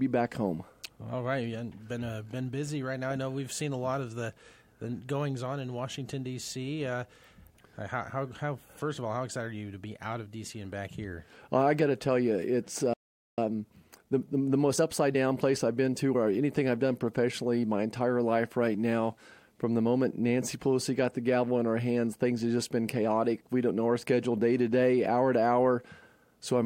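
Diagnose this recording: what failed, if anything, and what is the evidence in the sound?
Sound cuts to silence from 12.94 to 13.38 s, a 0.44 s gap, then resumes: a playback stall, likely the player's buffer running dry or its thread blocking.

From 13.38 to 16.32 s the audio rushes at 1.15 times speed without a pitch change. This is time-compressed catch-up, with playback splicing out short pieces to recover the backlog.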